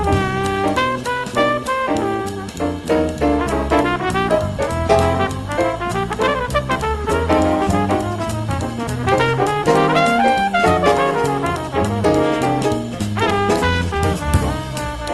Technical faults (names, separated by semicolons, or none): none